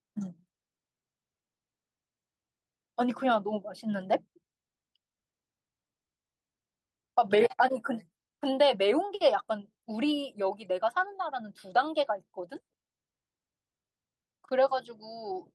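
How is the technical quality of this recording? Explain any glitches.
Nothing stood out on listening; there are no glitches in the recording to explain.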